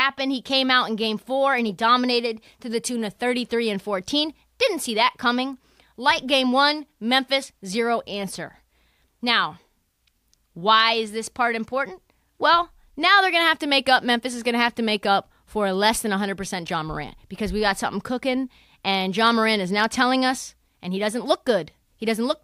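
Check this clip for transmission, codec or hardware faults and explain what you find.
No transmission, codec or hardware faults turn up anywhere in the speech. There is nothing in the audio to report or explain.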